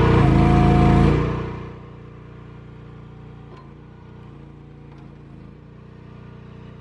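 Nothing in the audio stood out as a technical problem on listening.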